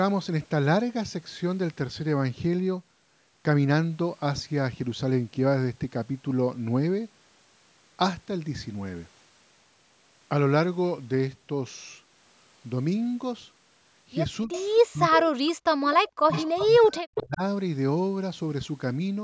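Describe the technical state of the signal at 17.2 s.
Speech suppressed in double talk runs from 16.49 to 17.43 s, so 17.2 s falls inside it. The talker's speech sinks sharply, at its deepest about 40 dB down, over roughly a second. The likely cause is an echo canceller that, with both sides talking at once, could not tell this talker apart from loudspeaker echo and attenuated everything it heard, pulling the wanted speech down with the echo.

An echo leak sits right on the moment, from 17.15 to 17.21 s. A brief scrap of delayed speech, trailing the original by 260 ms and about 10 dB below it, comes through. This is likely a speakerphone whose canceller let part of its microphone pickup escape and return down the line. It sits inside the suppressed stretch.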